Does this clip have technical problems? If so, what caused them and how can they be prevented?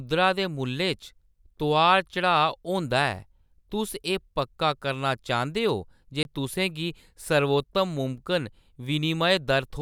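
Yes. At 6.23 to 6.25 s, the speech drops into a block of digital silence about 21 ms long. That fits one unfilled 1024-sample buffer. Larger buffers or higher audio-thread priority would prevent it.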